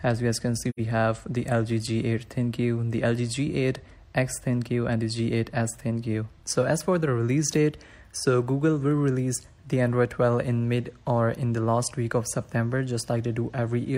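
AAC frame loss with muting occurs from 0.69 to 0.80 s: the decoder received no data for that stretch and zeroed its spectrum. The audio fades out and back in across the overlapping windows, leaving a soft-edged gap of about 85 ms that fits two lost frames.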